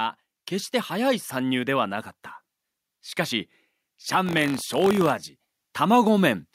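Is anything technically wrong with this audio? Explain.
Yes, there's buffer tearing from 4.25 to 5.10 s. The writer and reader of the ring buffer have drifted so each period mixes in a small slice of audio from one lap earlier, with hard joins, giving a robotic 46.9 Hz rattle on the speech that fits a 1024-sample buffer.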